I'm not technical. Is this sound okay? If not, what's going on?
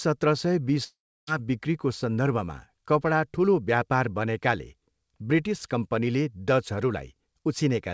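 No. There is a long network dropout from 0.84 to 1.29 s. For nearly half a second the speech gives way to a fading buzz that trails off into about a third of a second of near silence, and the speech resumes with that stretch simply gone. The likely cause is that the audio stopped arriving over the connection, so the receiving end padded the gap by stretching the last sound until it ran out. The call line itself cuts off sound above 8 kHz, which is normal for it.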